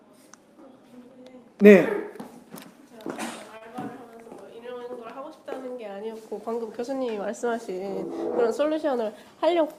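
At 3.57 s a packet arrived late and the jitter buffer ran dry, causing a short stall from a late packet. The receiver stretched the last sound for 36 ms until the packet arrived, losing nothing, so the sound lingers slightly too long, with a faint buzz or dip.

From 9.03 to 9.62 s a jitter buffer speed-up sets in: the buffer had grown past its target, so the receiver trimmed short pitch-period slices repeatedly, dropping roughly 50 ms in all. The audio runs at 108% speed without any pitch change and sounds briefly hurried.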